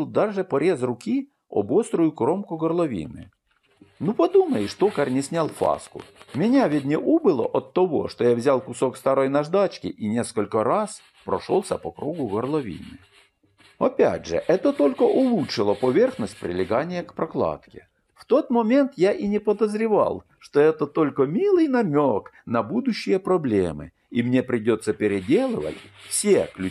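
Between 5.35 and 6.73 s, something injects repeated pulses into the signal, likely interference from nearby equipment or a faulty connection or power supply. The result is a train of clicks: around fifteen similar pops at about 10.2 per second, unevenly spaced, each roughly as loud as the surrounding sound.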